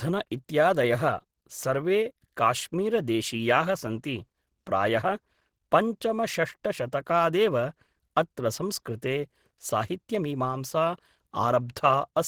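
Opus compression affects this speech clip throughout, making it hoarse and somewhat muffled despite content reaching 20.5 kHz, which is likely the encoder's hybrid speech mode starved at around 16 kbps.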